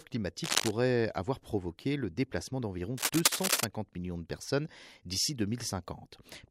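At 0.44 s a burst of cable scratch noise starts and runs to 0.71 s. It sounds like rough scratching laid over the speech, at roughly the same level. A second, longer burst runs from 2.98 to 3.65 s and sits somewhat louder than the speech. The cause is likely a worn cable, plug or control being moved. Its contact resistance jumps about quickly, and that flickering adds dense, uneven crackle to the signal.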